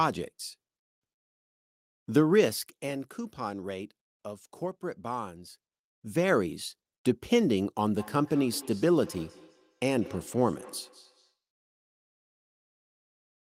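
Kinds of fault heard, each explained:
Feedback echo between two devices, 7.96 to 11.38 s: a second device replays this microphone's sound, which is picked up again, returning every fifth of a second at about -20 dB.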